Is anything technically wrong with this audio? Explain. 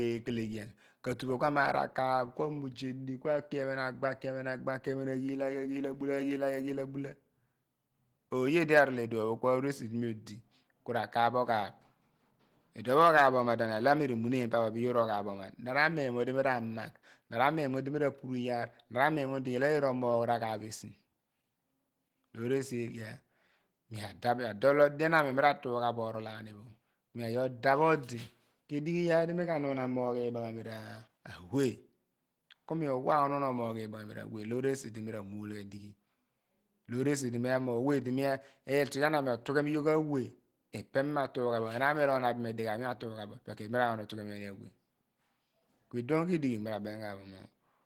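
Yes. Opus compression is audible across the whole recording: the speech sounds hoarse, grainy and muffled, with the content above 20.4 kHz gone. This is likely the encoder's hybrid speech mode at a low bitrate, around 16 kbps, filling starved bands with noise and folded energy.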